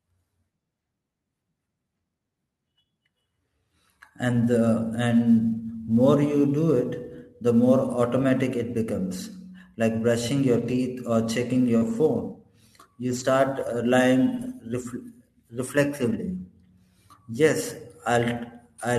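A hiss and graininess rides on the speech from start to finish. It thickens on louder passages and bright consonants and disappears in the pauses. This is sample clock jitter: the converter's clock wanders by a few microseconds, so each sample is taken slightly off time. The resulting error scales with how fast the waveform is changing, and here it sits roughly 35 dB below the signal.

At 8.73 to 8.75 s, just after "automatic it", the voice turns briefly rough and noisy for about 20 ms without any gap. The same coarser, fuzzier texture returns for 120 ms from 10.53 to 10.75 s, right after "like brushing". These are lost packets rebuilt from error correction. The missing audio was replaced by a low-bitrate backup copy carried in the following packet, so the sound continues but loses detail. The 120 ms stretch points to several separate 20 ms frames being lost.

From 11.77 to 11.83 s there is a short smear, with the sound briefly stretched and wobbling. 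This is short concealed packet loss. About 40 ms never arrived, and the decoder filled the hole by extending the preceding sound before blending back in. That same moment runs straight into another rough rebuilt stretch from 11.81 to 11.95 s.

Further rebuilt stretches follow at 13.07 to 13.21 s, 14.35 to 14.53 s and 16.01 to 16.15 s. Each lasts 80 to 100 ms and carries the same grainy, less defined quality.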